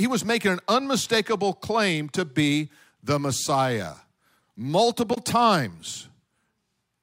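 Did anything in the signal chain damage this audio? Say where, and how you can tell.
Yes. At 5.13 to 5.18 s the speech breaks up for about 44 ms, the signature of damaged data in a compressed stream at the codec stage. Corrupted bytes made the decoder misread those frames, lose sync and hunt for the next valid frame header.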